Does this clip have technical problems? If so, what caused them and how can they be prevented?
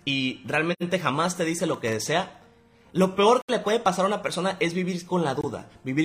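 Yes. From 1.74 to 2.54 s there is processor overload crackle: the processor repeatedly missed its deadlines for very short buffers, under a millisecond each, and about twenty of them went silent. On a waveform this shows as scattered tiny dropouts with hard edges, and a spectrogram shows thin vertical broadband streaks. Larger audio buffers or a lighter processing load would prevent it.

Two runs of corrupt frames were muted. At 3.42 to 3.50 s there is an 86 ms gap, which fits about three lost frames, and at 5.41 to 5.45 s a 42 ms gap fits about two. The decoder rejected the damaged frames, and the player filled them with silence. Each gap appears as an abruptly cut flat line on the waveform and a blank vertical band on the spectrogram. Error-protected transmission, or concealment that interpolates over the lost frames, would prevent these holes.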